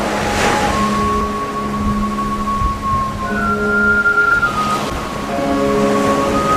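At 1.21 s there is a CD skip. The laser was knocked or hit a flaw and landed on a different turn of the disc's spiral. The player muted for only a few milliseconds, then carried on from the new spot. It is heard as a brief tick. The sound then resumes at another point in the recording. Nothing smooths the join, so the jump is abrupt.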